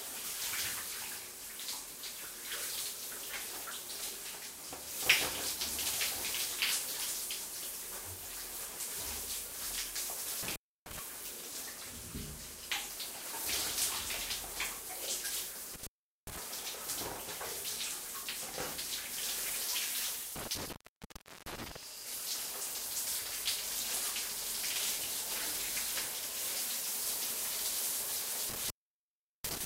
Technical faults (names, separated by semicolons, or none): intermittent contact